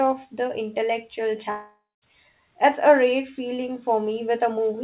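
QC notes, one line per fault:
1.50 to 2.04 s, long network dropout: the sound smears into a fading buzz, drops to silence for 0.22 s, then resumes with a chunk missing, likely from lost packets.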